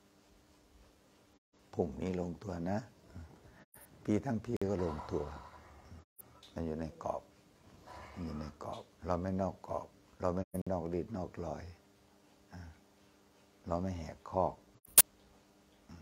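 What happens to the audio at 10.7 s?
At 10.62 s a gap between chunks opens, lasting until 10.67 s. The audio arrives in 6-second blocks, and silence lands between two of them. The result is a 50 ms hole with hard edges. Nothing is lost. The flow simply stops, then resumes.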